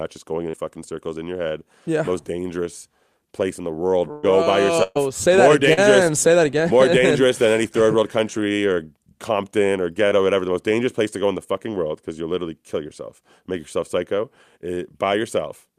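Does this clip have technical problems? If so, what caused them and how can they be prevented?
Yes. Short concealed packet loss appears at 0.49–0.55 s, 5.73–5.79 s and 10.09–10.13 s. About 40 ms, 40 ms and 20 ms of speech failed to reach the decoder in time, so the receiver extended the preceding sound across each gap, leaving a brief smear or wobble. Enabling in-band forward error correction and a modestly deeper adaptive jitter buffer would let the receiver recover or wait for these isolated packets.

A burst of packet loss occurs at 4.11–4.25 s and again at 4.83–4.97 s, each removing about 120 ms of speech. The receiver continued the last sound while fading it, producing a held buzz or fading hiss before speech resumes further on. The second burst ends with about 10 ms of silence. Prioritising the call traffic with QoS and preferring a wired or less congested link would reduce the run of consecutive losses behind these bursts.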